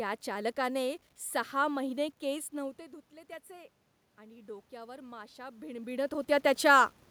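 Low bit depth without dither runs through the whole clip: a grainy, signal-following distortion sits roughly 40 dB below the speech and grows coarser as the voice gets quieter, with the softest tails turning gritty. The likely cause is that the audio was rounded to about 9 bits with no dither added, so the rounding error tracks the waveform and is heard as distortion rather than as a steady hiss.

Automatic gain rising runs from 2.58 s to 6.01 s. Around 2.5 s the talker moves away from the microphone and the input level falls by 17 dB. The gain control responds by raising its gain about 7 dB over more than three seconds. Voice and room noise swell together during this time, so the background becomes more prominent as the gain climbs. The talker moves again near 5.5 s.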